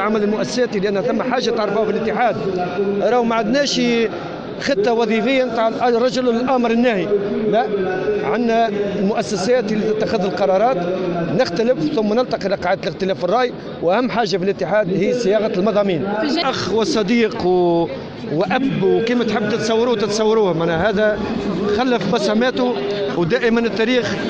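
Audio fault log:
No faults detected in this clip.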